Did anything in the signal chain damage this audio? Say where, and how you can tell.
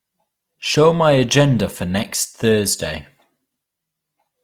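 Yes, at the codec: the speech sounds grainy and rough throughout, likely Opus compression in CELT mode noise-filling starved bands, which fits a bitrate near 24 kbps.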